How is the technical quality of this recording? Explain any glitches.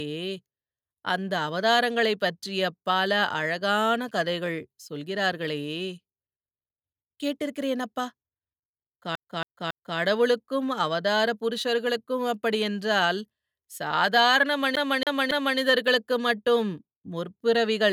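The speech is interrupted twice by CD stuck on one turn faults, the stutter of a skipping disc. From 9.15 to 9.98 s, then again from 14.76 to 15.59 s, a 0.28 s slice repeats three times. A scratch throws the laser back each turn, with a brief mute at every jump.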